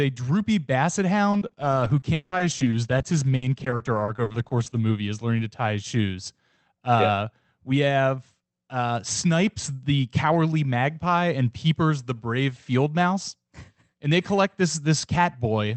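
From 1.31 to 4.78 s, repeated packet loss (robotic sound) chops the speech: about two dozen gaps, the longest 180 ms, each filled by extending the previous sound. The result is choppy, with pieces missing. A spectrogram shows frozen, smeared harmonic bands and breaks below the call path's 8 kHz ceiling.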